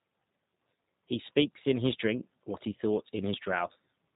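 It's a speech clip carrying G.729 codec damage the whole way through, and it's plainly audible: everything above about 3.8 kHz is gone, and the voice comes out slightly rough and synthetic. That's the sound of a pulse-and-filter speech rebuild at a bitrate that fits 8 kbit/s G.729A.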